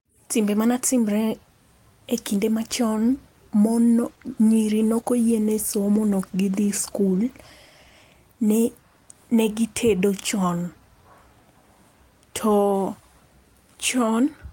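From 4.04 to 8.11 s a call bitrate drop makes the speech coarse and muffled, consistent with the encoder falling from about 32 to 17 kbps.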